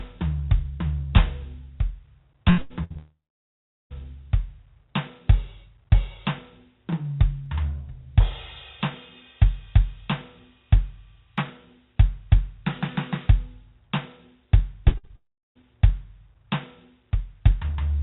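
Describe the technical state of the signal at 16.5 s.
At 16.5 s the music comes through intact, with no fault present, only the ordinary narrow sound of the call path, which carries nothing above 4 kHz and fits a 64 kbps G.711 A-law codec.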